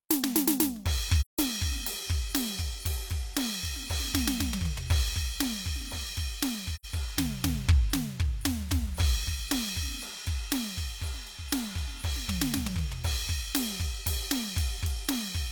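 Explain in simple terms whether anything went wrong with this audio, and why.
AAC frame loss with muting, at 1.21 to 1.39 s and 6.75 to 6.85 s: chunks of the compressed music went missing, so the player filled them with silence. The music fades out and back in smoothly, leaving soft gaps of about 0.17 s and 0.09 s.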